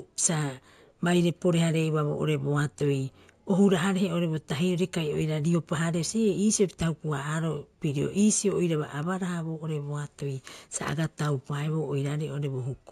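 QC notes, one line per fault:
throughout: imaging from linear upsampling. Sibilants have a faint metallic shimmer over a dulled top end. Straight-line interpolation, which fits a 16 kHz source raised to 48 kHz, filtered weakly and left a mirrored copy of the spectrum at 8 to 16 kHz, roughly 20 dB down.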